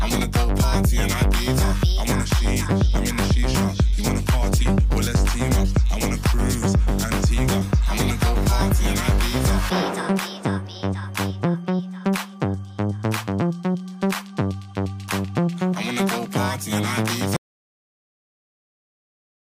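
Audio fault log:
17.37 s to end, audio dropout to silence: the sound cuts off abruptly mid-flow at 17.37 s and nothing follows for the remaining 2.2 s or so, not even room tone, just silence. That total absence points to the input being lost, likely through a disconnected device, failed link or accidental mute, while the recorder kept writing empty samples, so whatever happened after that moment was never captured.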